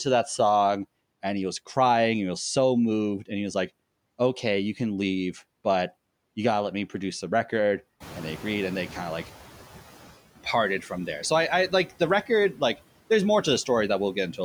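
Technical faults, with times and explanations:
Throughout, noise suppressor artifacts: the suppressor judges each frequency band frame by frame and pulls down whatever it takes for steady noise, by about 17 dB here. The background therefore drops away in the gaps between words and swells back underneath the speech, so the noise floor pumps with the talking.
8.0 to 9.84 s, noise suppressor catching up: the room noise jumps by about 17 dB at around 8 s, settling about 18 dB below the speech. The suppressor's noise estimate is still tuned to the quieter background, so at first it removes only about 9 dB and the louder noise bursts through. Over roughly 1.8 s the estimate adapts, and the background then sinks back down.
12.53 to 12.78 s, speech cut by the noise suppressor: here the suppressor mistakes part of the speech for background and turns it down along with the noise, by about 10 dB at the deepest point. 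Only around a tenth of a second within this span is affected, so a soft consonant or word ending sounds swallowed, faint or clipped short rather than fully articulated.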